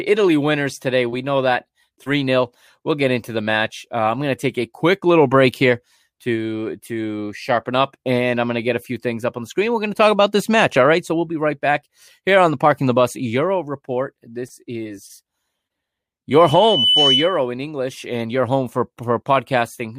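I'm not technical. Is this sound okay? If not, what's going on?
No. At 16.31 seconds a loudspeaker feedback squeal starts. A microphone is picking up its own speaker, and one high tone, near 3 kHz, keeps looping. It swells over about half a second to a little louder than the speech, then stops at 17.47 seconds.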